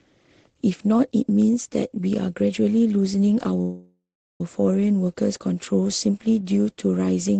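A call audio freeze runs from 3.61 to 4.41 s. The speech stalls into a fading buzz or hiss, then silence for about 0.39 s, and resumes exactly where it stopped. Delayed packets likely emptied the jitter buffer, so about 0.79 s is inserted and nothing is lost. Throughout, the codec's coding noise and a top end cut off near 8 kHz fit Opus at around 20 kbps.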